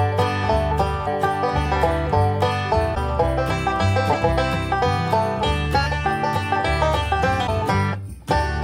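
At 1.06 s the audio jumps forward by roughly 150 ms, which points to compressed frames skipped, about seven frames of 26.1 ms each. Because adjacent frames overlap, the join is a short smeared blip, not a sharp click. On a waveform the envelope simply resumes at a later point with a softened seam, and a spectrogram shows the texture changing abruptly behind a faint, slightly blurred vertical band. Three longer disturbances, each lasting about 30 ms, fall at 2.94–2.97 s, 4.12–4.15 s and 7.46–7.49 s. At each one the sound lurches ahead and a brief garbled patch follows. These are likely a broken MP3 bit reservoir: after a cut, the next frame reaches back for borrowed bytes and decodes data that belong to a different frame. A spectrogram shows each one as a narrow vertical smear of disordered energy, and the waveform shows a short irregular patch at each seam.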